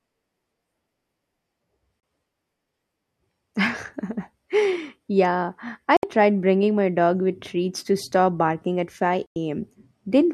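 At 2.00, 5.97 (before "tried bringing my dog") and 9.28 s (after "to stop barking at"), digital broadcast dropouts mute the speech for 32, 64 and 96 ms as the receiver discards failed frames, fitting one, two and three lost frames. Each shows as a flat waveform gap and an empty vertical strip on the spectrogram.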